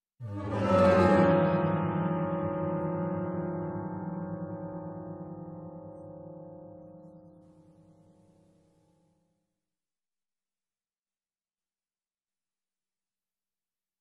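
At 1.16 s the quality drops suddenly with no gap, and it stays that way until 13.16 s. That's an adaptive stream switching to a lower bitrate, probably because the connection slowed and the player fetched a cheaper version. You lose the top end: nothing above about 11.4 kHz survives, and codec artefacts come up. The sound fits AAC falling from around 96 to roughly 32 kbit/s, and it snaps back at the end.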